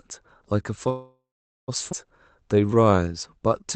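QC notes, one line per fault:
0.89–1.70 s, call audio freeze: the sound stops and the last fragment is drawn out as a fading buzz, then about 0.44 s of silence, 0.79 s in all. This is likely packets held up until the jitter buffer ran dry. Playback resumes where it stopped, so nothing is lost, but the stream now runs 0.79 s later.
1.92–1.94 s, skip ahead: playback jumps forward with only a 5 ms join, and about half a second of audio is gone. A stretch of audio was dropped on the way or by the jitter buffer when it overflowed, and the two sides are stitched almost directly together.
2.41–3.76 s, jitter buffer slow-down: from here to the end the audio runs at 91% speed with unchanged pitch, adding 133 ms. Sounds are stretched because the buffer repeats single pitch periods and bits of pauses to rebuild its reserve.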